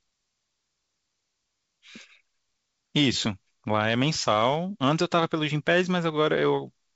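Nothing stood out on listening to this speech, which comes through the G.722 wideband telephone coding at 64 kbit/s.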